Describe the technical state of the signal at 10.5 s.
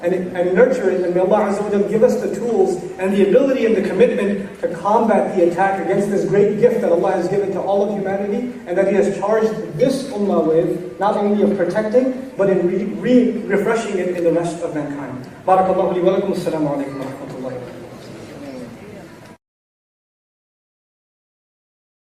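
At 10.5 s the signal is intact, with no audible dropout, distortion, noise burst or other technical fault.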